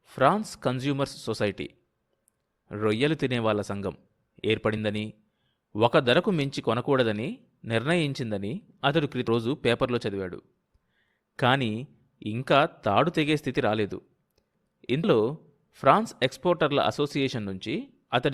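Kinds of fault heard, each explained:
Damaged data in a compressed stream: two very short blips break into the speech, one from about 9.27 to 9.29 s and another at 15.03 s, each lasting only around 20 ms. They come from corrupted bytes in the encoded stream. The decoder cannot read those frames properly, so it loses its place and hunts for the next valid frame header, and it outputs a brief burst of wrong sound before decoding settles again.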